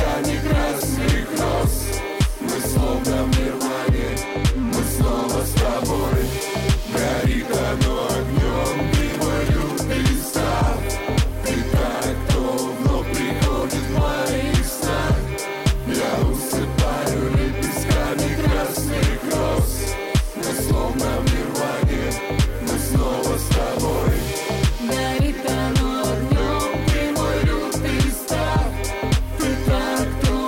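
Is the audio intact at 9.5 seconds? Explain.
No. From 8.99 to 9.72 s, GSM signalling bursts break in: a nearby 2G phone is exchanging short groups of radio bursts with the network, and the audio circuitry rectifies that RF energy into the signal path. The result is a galloping dit-dit-dit of brief buzzes pulsing at about 217 Hz, sitting roughly 10 dB below the wanted audio and present through the 9.5 s mark.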